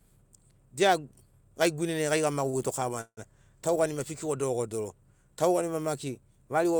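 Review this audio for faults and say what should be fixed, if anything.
At 2.49 to 2.55 s, a short stall from a late packet: one packet missed its playout time and the jitter buffer ran dry, so the receiver held the last sound for 38 ms, then resumed where it left off. The held sound has a faint buzzy sustain, nothing is lost, and the speech runs 38 ms later afterward. A deeper or adaptive jitter buffer would absorb a late arrival of this size.

At 3.01 to 3.19 s, a call audio freeze, likely from packets held up in transit long enough to drain the jitter buffer. The receiver extended the last sound for 158 ms as a fading buzz, with the final 50 ms fully silent, then resumed without loss, leaving the speech 158 ms later. Improving the network path's queuing and prioritisation would prevent this longer hold-up.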